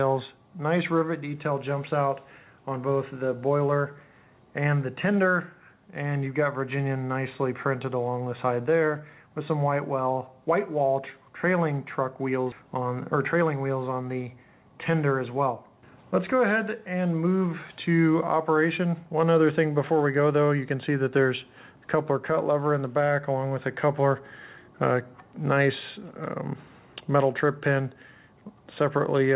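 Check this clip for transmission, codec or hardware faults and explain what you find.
Two faults, back to back around 12.5 seconds: a skip ahead and then a short jitter buffer speed-up. The band-limited sound, with nothing above 4 kHz, fits a G.711-style call path.

Skip ahead, at 12.52 s: Later audio was already queued, and a stretch of roughly 0.4 s was discarded on the way or by an overflowing jitter buffer. No fill was inserted, so playback jumps straight from one side of the missing material to the other. It is heard as an abrupt forward lurch, with the sound before and after butted directly together.

Jitter buffer speed-up, from 12.61 to 12.86 s: The buffer still held more audio than its target, so the receiver repeatedly cut short pitch-period-sized pieces, a few tens of milliseconds in total. This made playback run at 112% speed at unchanged pitch. The quarter-second just after the skip sounds briefly rushed before normal pacing returns.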